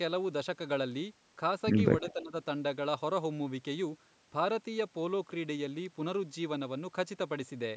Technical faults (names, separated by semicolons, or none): speech suppressed in double talk